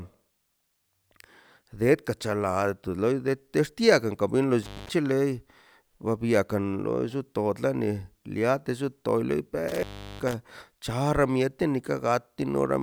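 At 4.63 s the speech cuts out with intermittent contact. A loose cable or plug briefly loses its connection. The line stays open for about 0.2 s, with crackle at either edge and faint hiss in the gap. The same fault returns between 9.68 and 10.34 s. This time the dropout is longer, about 0.36 s. Again crackle marks the break and the reconnection, with hiss in between.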